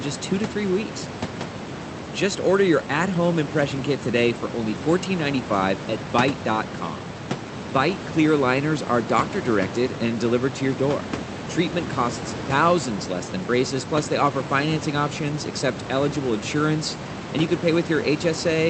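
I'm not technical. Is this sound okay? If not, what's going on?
Yes, this sound is okay; nothing in it is going wrong.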